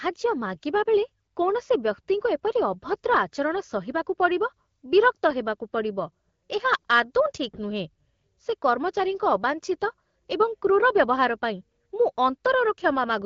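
No faults can be heard in the signal, which carries the audio through an AMR wideband (HD Voice) codec at 12.65 kbit/s, a rate at which the coding leaves only light traces on the sound.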